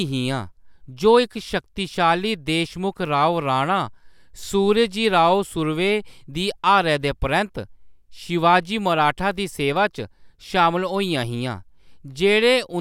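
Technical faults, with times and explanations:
No technical faults can be heard in this clip.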